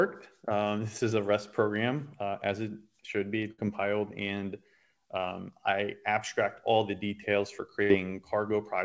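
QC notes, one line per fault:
3.52–3.59 s and 7.83–7.91 s: burst of packet loss. Consecutive packets went missing, so concealment stretched and faded the last sound for about 65 ms, then playback resumed with 60 ms skipped.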